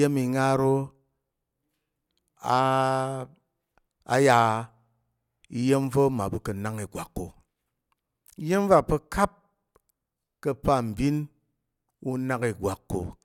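No technical faults can be heard anywhere in this speech recording. Nothing in the audio stands out as a problem at any point.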